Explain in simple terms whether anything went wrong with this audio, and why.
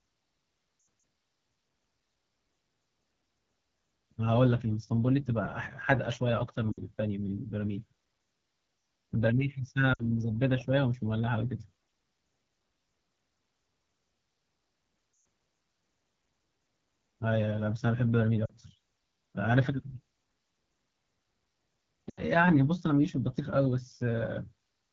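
AMR wideband (HD Voice) codec, throughout the clip: the phone network's speech coder is running at one of its lowest settings, so the speech sounds rough and raspy. It rebuilds the sound from a simple model of the throat and mouth and fills the very top with shaped hiss.

Lost AMR speech frames at 0.79 to 1.03, 6.72 to 6.81, 9.93 to 10.04, 15.13 to 15.25, 18.45 to 18.51 and 22.10 to 22.21 seconds: radio errors spoiled short slices of speech. The decoder patched each gap by repeating the last good sound while fading it, heard as brief dips or warbles lasting 40 to 120 milliseconds.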